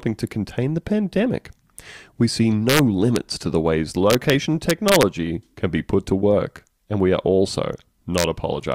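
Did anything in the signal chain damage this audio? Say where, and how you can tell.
Yes. The speech has integer overflow in a fixed-point gain or sample-format conversion stage. Violent cracks land on loud peaks at 2.70–2.79 s, 3.16 s, 4.10–4.30 s, 4.70–5.03 s and 8.18–8.24 s. The overdrive is only about 0 to 2 dB, but samples past full scale wrap to the opposite sign instead of being held. That full-range jump makes a sharp snap rather than the flattened, buzzy tops that clipping gives.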